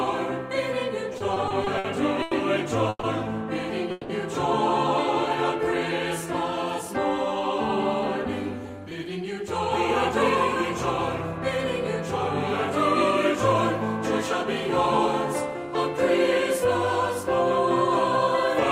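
From 1.13 to 3.05 s, repeated stalls (stutter): eight late-packet gaps, about 380 ms in total and up to 140 ms each, are filled with stretched, fading sound that shows as smeared, repeated spectrogram columns.

From 3.91 to 4.11 s, a call audio freeze adds a 180 ms hold of continued sound. Its likely cause is a stalled packet stream. The waveform shows a flat, repeating texture before normal sound resumes.

From 8.62 to 9.48 s, jitter buffer speed-up runs the audio at 109% with unchanged pitch. Roughly 70 ms of pitch periods are trimmed, which shows as small splices in the spectrogram.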